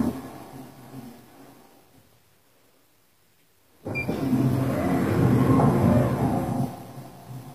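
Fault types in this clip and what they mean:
HE-AAC compression: The treble was likely rebuilt by spectral band replication rather than coded directly, with only the lower spectrum carried at a rate that fits roughly 24 kbps. The upper bands are copies of lower ones, shaped by a coarse envelope, so their harmonics fail to line up with the real content below. Throughout, the top end sounds gritty and metallic, with clearly audible damage, and stops entirely at about 15.4 kHz.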